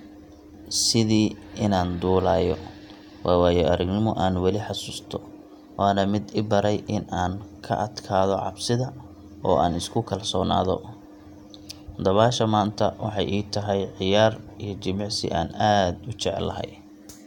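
Speech, with no audible faults.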